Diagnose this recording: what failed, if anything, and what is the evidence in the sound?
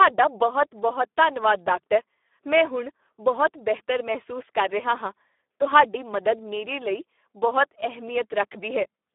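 The codec stage failed: this speech has heavy Speex codec damage throughout. It sounds hoarse and noisy, which points to a low setting near 8 kbps. Too few bits go to the excitation. The band runs only from about 250 Hz to 3.6 kHz, with nothing above 3.8 kHz.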